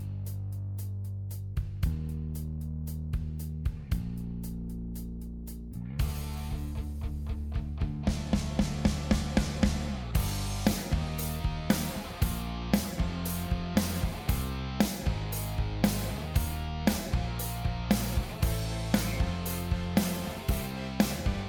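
No technical faults are audible anywhere in the recording.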